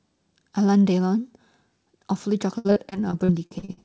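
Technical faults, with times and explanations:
2.58 to 3.79 s, repeated packet loss (robotic sound): the last stretch goes choppy, with about ten short holes, the longest around 69 ms. Each one gets patched by stretching the previous bit of sound, so roughly 30% of that span is filler rather than real audio. Chained repeats like that give the buzzy, robotic texture, with clipped-off fragments riding on a wideband call path that already tops out at 8 kHz.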